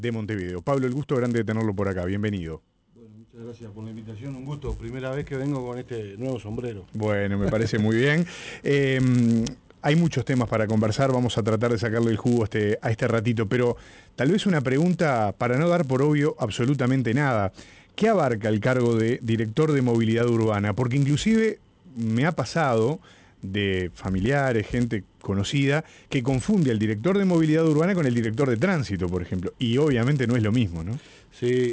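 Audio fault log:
Throughout, resampler restarted on every block: a steady 100 Hz buzz under the sound, because each 10 ms block was converted separately, leaving an error at every edge.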